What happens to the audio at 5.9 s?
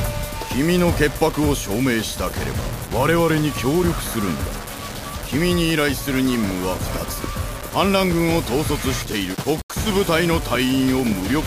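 At 5.9 s the sound is grainy, and the grit follows the signal. That runs through the whole clip. The likely cause is low bit depth without dither: about 5 bits, rounded. The error sits only around 15 dB below the signal. Quiet sounds turn gritty.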